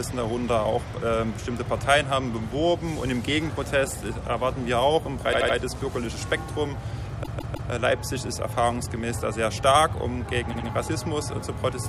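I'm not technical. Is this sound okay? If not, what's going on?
No. This clip has repeated frames: a short chunk of the compressed audio was stored or sent more than once, so the player ran it again. You hear a stutter at 5.32 to 5.55 s (a 78 ms piece played three extra times), 7.22 to 7.69 s (a 157 ms piece, three extra times), and 10.52 to 10.67 s (a 78 ms piece, two extra times). Each stutter makes the clip slightly longer.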